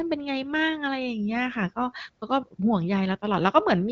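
A speech recording with no technical faults to report. It has passed through an AMR wideband (HD Voice) codec at a rate consistent with about 15.85 kbit/s, so the speech stays clear, with the band up to about 7 kHz and only light coding texture.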